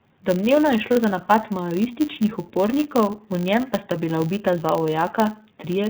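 The speech runs through the iLBC codec for its whole length, and the codec damage is plainly audible. Nothing above 4 kHz survives, and the voice has a rough, slightly synthetic edge. That is the excitation of each 30 ms frame being coded on its own, which fits the codec's 13.33 kbps mode. Unlike simple low-pass dulling, this also coarsens the texture of the voice.

Under that, a filter restarted on every block produces a steady buzz at 100 Hz. Each 10 ms block starts the filter from silence, so a tiny transient marks every block boundary. This buzz stays at a fixed rate while the voice's pitch moves, and its loudness rises and falls with the speech level. That separates it from the codec's roughness.

At 0.93 to 0.97 s, lost iLBC frames leave about 30 ms where the decoder repeats the last pitch cycle mixed with noise. The gap sounds like a brief held, buzzy vowel rather than a click or silence. 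The voice returns intact almost immediately because each frame decodes independently.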